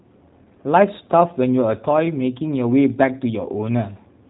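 A speech clip that carries plainly audible G.729 codec damage from start to finish, the sound of a low-rate VoIP link, likely G.729A at around 8 kbit/s. Nothing reaches above 3.8 kHz, so sibilants lose their edge and the band sounds boxed in. Because the codec rebuilds each 10 ms frame from a vocal tract filter, a pitch predictor and a few pulses rather than the waveform itself, the voice comes out rough and faintly synthetic.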